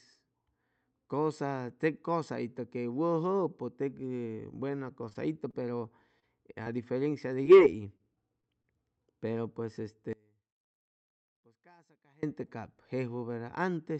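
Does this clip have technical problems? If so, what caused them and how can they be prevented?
Yes, three kinds of problem show up.

Repeated packet loss (robotic sound) hits from 4.77 to 5.66 s and again from 7.97 to 8.66 s. Packets kept going missing, six gaps in the first stretch and five in the second, none longer than about 26 ms. Each hole got patched by stretching the previous sound, which gives that choppy texture. A steadier network link or a deeper jitter buffer would prevent it.

Short concealed packet loss pops up three times on its own, at 6.20–6.24 s, 6.63–6.67 s and 7.43–7.47 s. Each time about 20 ms of audio never arrived, and the decoder filled the gap by continuing the last sound, so you hear a quick smear or wobble. Better network stability and forward error correction in the call codec would cover these.

One channel inverted takes over from 10.13 to 12.23 s. When the channels are summed to mono, the shared centre content cancels and the level drops by about 30 dB, leaving a faint remnant. 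This is likely a polarity flip on one channel somewhere in the chain. Checking polarity, for example with a correlation meter before the mono fold-down, would catch it.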